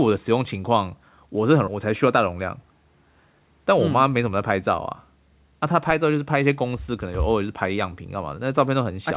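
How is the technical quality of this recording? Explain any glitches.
The speech has two timing glitches. The band-limited sound, with nothing above 4 kHz, fits a G.711 A-law call path.

At 1.68 s there is a skip ahead. Roughly 0.7 s of speech was dropped while later audio was already queued, so the two sides join directly with no gap. On a waveform or spectrogram the syllable patterns change abruptly at a butt splice, with no silence.

From 2.08 to 2.67 s a jitter buffer speed-up runs the speech at about 111% without changing pitch. The buffer trimmed a pitch period or a few at a time, about 70 ms in total, to cut excess delay. It sounds hurried. Harmonics stay level on a spectrogram while syllables look compressed in time.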